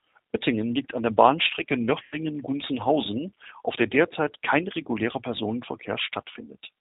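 Throughout, the speech has that rough, slightly synthetic G.729 sound, capped at 4 kHz and plainly damaged, which fits an 8 kbit/s stream. At 2.03 to 2.17 s, and again at 4.83 to 4.88 s just after "auf der derzeit kein", you hear VoIP packet loss concealed by the speech codec: the decoder stretches the last sound into a fading buzzy tone or coloured noise, covering about 90 ms and then 30 ms.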